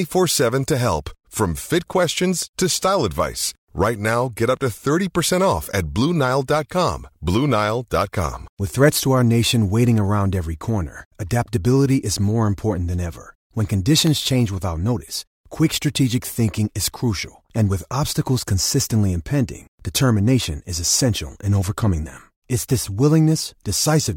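From 8.97 to 14.07 s, something blocks the USB bus or audio driver every 1.02 s, causing periodic USB or driver dropouts. Each gap, a tiny fraction of a millisecond, drops to silence, giving a run of evenly spaced ticks within the speech that end just before "change without notice quick".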